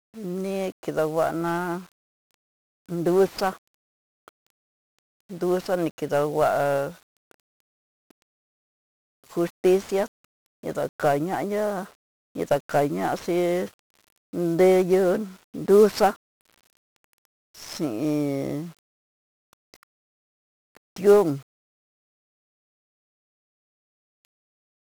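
From the first moment to the end, the speech carries the fuzzy, crackling texture of 1-bit DFPWM compression. Each sample is reduced to a single up-or-down step of an adaptive level, so heavy broadband quantisation noise rides on every syllable and buries the treble in hiss, a density that fits a rate near 48 kbps. Unlike a low-bitrate MP3, there is no swirling or warbling: the damage is a steady grainy fizz rather than smeared, watery artefacts.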